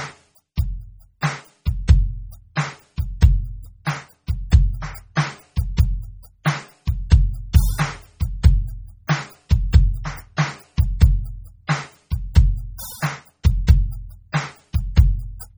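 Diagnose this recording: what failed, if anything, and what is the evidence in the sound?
The codec stage failed, most likely through MP3 compression at a very low bitrate. Throughout the music the sound is watery and swirling, bright noisy high content chirps metallically, and attacks smear. On a spectrogram the upper band is speckled with holes that flicker on and off from frame to frame. On the waveform, transients are blurred. The damage is heavy, consistent with roughly 32 kbps.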